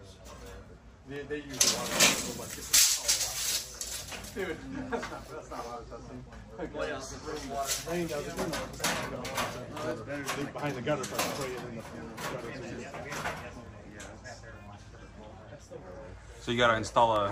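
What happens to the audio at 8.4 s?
At 8.4 s, periodic USB or driver dropouts (0.16–17.16 s) blank roughly a millisecond every 0.25 s, ticking steadily, visible as evenly spaced waveform gaps and vertical spectrogram lines.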